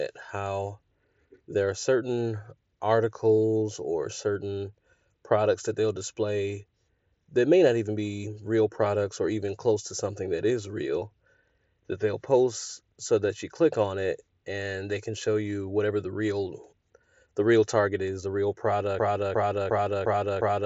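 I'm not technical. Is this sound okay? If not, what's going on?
No. From about 18.99 s, right after "target is the real", the audio gets stuck: a short scrap about 0.35 s long plays five times in a row, like a skipping CD, and the clip ends that way. This is a broken-record loop. Most likely the player or stream stalled and kept replaying the last bit it held, so whatever should have come next is missing. The sound also has a slightly muffled Bluetooth-headset quality throughout.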